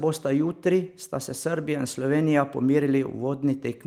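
No technical faults can be heard anywhere in the speech.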